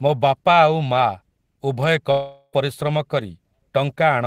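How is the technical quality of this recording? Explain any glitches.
The recording has one glitch in the speech. From 2.11 to 2.55 s there is a long network dropout, likely caused by packets failing to arrive: the receiver extends the last sound as a fading buzz or hiss for about 0.4 s, leaves a brief 30 ms silence, then resumes with roughly 0.42 s of speech lost.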